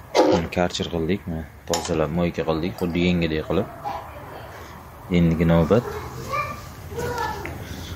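No technical faults are audible anywhere in the recording.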